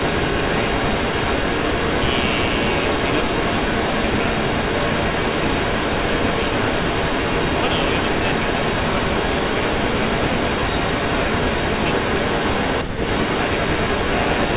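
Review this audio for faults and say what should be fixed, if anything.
There's an echo leak running the whole way through, from 0 to about 14.6 seconds. A delayed copy of the speech trails the original by roughly 0.3 s, and it sits about 5 dB above the direct speech. That's most likely the far end playing the call on a loudspeaker, with its echo canceller letting the mic pickup slip back into the call. Everything tops out around 4 kHz, which fits a narrowband telephone codec. To prevent it, have that side use a headset or tune its echo canceller for the speaker-to-mic path.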